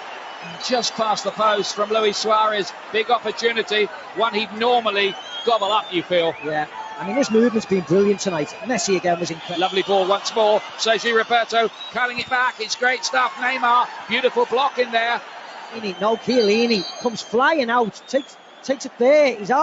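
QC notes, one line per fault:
Throughout: noise suppressor applied to music or sounds. A speech-tuned suppressor treats held tones and tails as noise, so level swings by roughly 10 dB and pumps.
0.0 to 7.02 s and 8.46 to 19.0 s: sound cut by the noise suppressor. Steady and decaying parts sink by up to about 8 dB, a few seconds' worth in each span, while attacks slip through.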